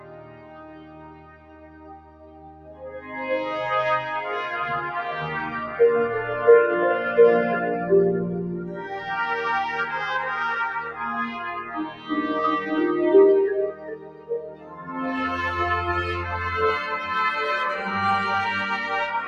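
Throughout, a noise suppressor meant for speech acts on non-speech sound, treating steady tones and tails as noise. Gain swings by around 20 dB, so sustained parts pump and thin while attacks pass. Unlike a compressor, it reacts to steadiness, not loudness. The sound is cut by the noise suppressor from 0.00 to 3.16 s (by about 15 dB), 8.58 to 9.07 s (about 7 dB), 11.62 to 12.10 s (about 11 dB) and 13.71 to 14.98 s (about 15 dB). Each time, held or decaying material sinks or is cut short rather than vanishing outright as in a dropout.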